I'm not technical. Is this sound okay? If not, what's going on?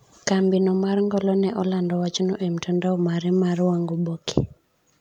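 Yes, it's fine, with nothing going wrong in it that you'd need to worry about.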